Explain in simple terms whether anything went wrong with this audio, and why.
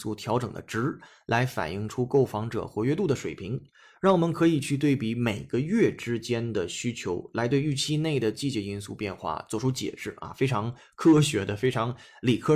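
Nothing went wrong with it.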